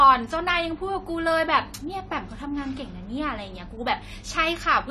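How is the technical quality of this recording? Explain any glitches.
The recording carries audible AAC compression damage the whole way through, and it's plainly noticeable on the speech.

The whole clip sounds like AAC compression, likely AAC-LC squeezed to a low rate, which fits something around 32 kbps. Nothing survives above 13.7 kHz, so the top end sounds dull and closed in. With so few bits, the encoder coarsely quantises each frame's spectrum and drops or fakes whole bands. That leaves a smeared, warbly texture on sustained sounds and a fizzy edge on the sibilants.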